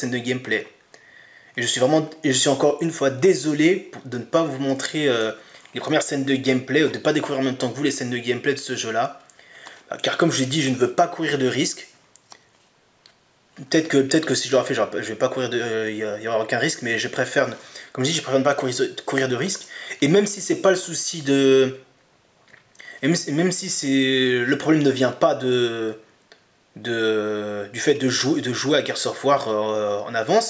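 No technical faults can be heard anywhere in this audio.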